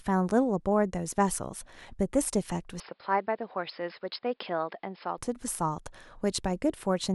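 Speech clip, and from 2.80 to 5.18 s it goes boxy: nothing above about 5.2 kHz, about 5 dB quieter, with a new noise floor roughly 45 dB down, switching in and out with no gap. That's likely an input switched to a poorer device, then back.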